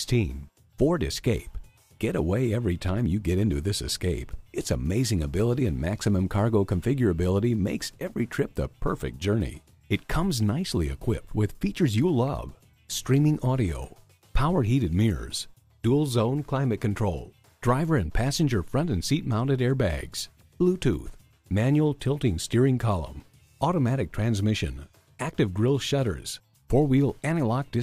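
No technical faults can be heard anywhere in the signal.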